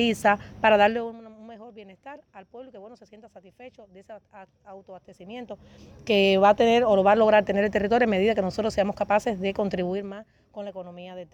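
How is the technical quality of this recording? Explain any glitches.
Two stretches of zipper noise mar the recording, both during quick level drops.

Zipper noise, 0.85–1.20 s and 9.83–10.18 s: the level falls around 20 dB, then around 15 dB, in unsmoothed 1 dB jumps roughly a hundred times a second. Each jump clicks, giving a buzzy zipping. A spectrogram shows evenly spaced faint vertical streaks; the waveform envelope steps like a staircase.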